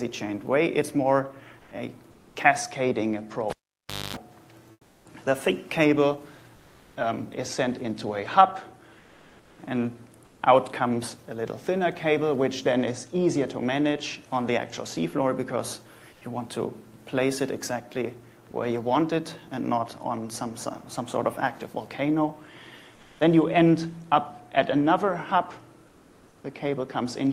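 The background is replaced by comfort noise seven times: at 1.59–2.35 s, 4.71–5.05 s, 6.55–6.95 s, 8.99–10.41 s, 16.13–16.21 s, 22.95–23.19 s and 25.87–26.43 s. Each time, the real room tone turns into a flat, featureless hiss. At 4.71 s it also drops by about 8 dB. Opus discontinuous transmission is the likely cause. The sender stops during pauses, and the receiver makes up noise to fill them. From 3.50 to 4.17 s there is a cable pulled and plugged in. A pop comes first, then roughly 0.6 s of near silence. A 246 ms burst of 50 Hz mains buzz follows as the plug makes partial contact, and a second pop marks the return. At 18.51–18.53 s, sound is likely dropped by the voice detector. About 10 ms of real sound is mistaken for background and swapped for synthetic noise. The highs stop near 12 kHz, which fits a super-wideband call codec path.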